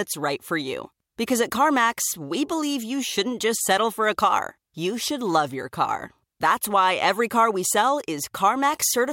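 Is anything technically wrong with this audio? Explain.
No, nothing technically wrong can be heard in this speech recording. No fault turns up at any point in it.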